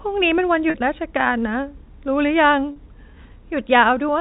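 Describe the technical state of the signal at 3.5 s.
At 3.5 s the speech passes through intact, with only the narrow telephone band of G.711 coding and no fault at that moment.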